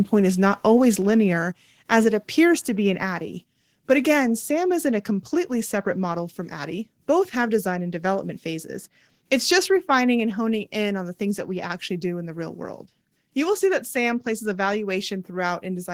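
A microphone volume stepped down at 1.02 s in this speech clip, just after "is not always": the level drops by about 3 dB at once, likely because call software cut the input volume.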